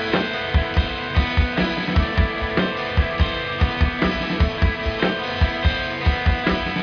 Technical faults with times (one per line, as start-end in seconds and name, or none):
none